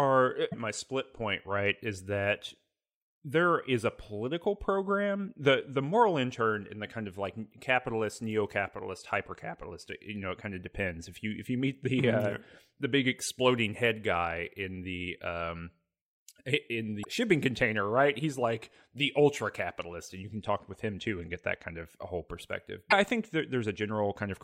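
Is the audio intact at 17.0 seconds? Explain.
No. From 16.99 to 17.05 s the speech breaks into a brief glitch, heard as a chirp, squawk, click or short hole. This is damaged data in a compressed stream. Corrupted bytes leave the decoder unable to read those frames. It loses sync and hunts for the next valid frame header.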